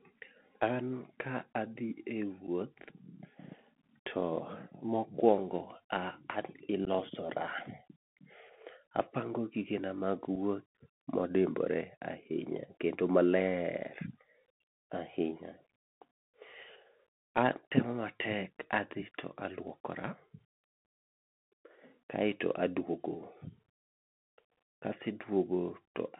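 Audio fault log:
throughout Bluetooth CVSD headset codec: The speech sounds narrow and boxy, with nothing above about 3.4 kHz or below about 150 Hz. S sounds come out scratchy, louder high-pitched sounds distort, and a grainy hiss sits underneath. This points to the CVSD headset link, whose one-bit-per-sample coding fits a 64 kbps stream. When the sound changes quickly, the adaptive step size falls behind and leaves that rough, distorted texture.
2.47, 6.85–6.88, 10.35, 20.85 unconcealed Bluetooth headset packet loss: The speech drops out abruptly in short holes, about 7.5 ms at 2.47, 10.35 and 20.85, and about 15 ms at 6.85–6.88. Each gap fits one lost voice packet, or about two at 6.85, between headset and phone. Nothing filled in the missing audio, so the sound simply stops and then returns.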